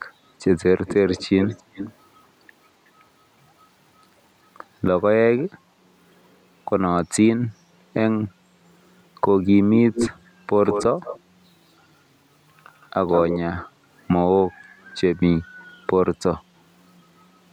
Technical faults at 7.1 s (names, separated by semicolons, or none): none